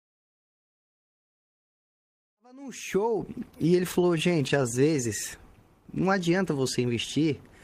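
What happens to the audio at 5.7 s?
Nothing goes wrong at 5.7 s; the audio plays through that moment intact, with no dropout, click or other fault.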